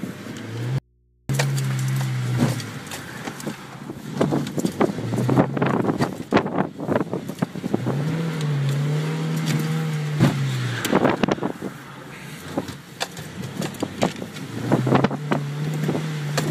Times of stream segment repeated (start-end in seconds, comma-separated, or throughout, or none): none